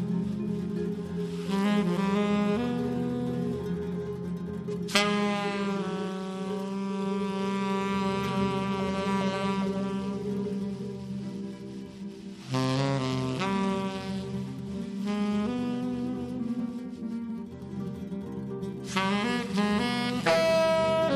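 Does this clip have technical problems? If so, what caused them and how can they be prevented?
No, this clip has no technical problems, so there is nothing to prevent.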